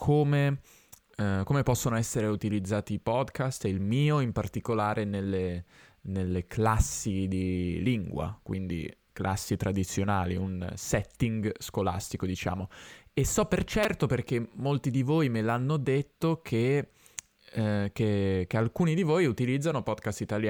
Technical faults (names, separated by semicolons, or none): repeated buffer